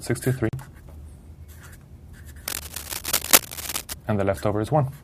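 At 0.49 s the audio drops into a block of digital silence lasting 40 ms, ending at 0.53 s. Samples were zeroed rather than faded, so the signal cuts out abruptly and returns just as sharply, leaving a short, audible hole.

From 2.48 to 3.93 s, cable scratch noise sits over the sound as dense, irregular rustling bursts, at about 5 dB above the signal. The likely cause is a worn cable, connector or control being moved, with its contact resistance fluctuating rapidly throughout that stretch.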